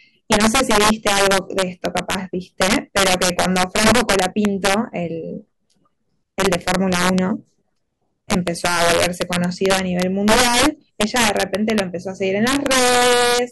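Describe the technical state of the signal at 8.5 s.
At 8.5 s the signal is affected by integer overflow, which runs through the whole speech clip. The level is driven roughly 8 dB past full scale, and wherever a peak exceeds the largest representable integer, around 2 percent of samples, the value wraps to the opposite extreme instead of being limited. Each wrapped peak jumps across the full range, producing harsh, violent cracks on the louder syllables, sharper and more abrupt than ordinary clipping.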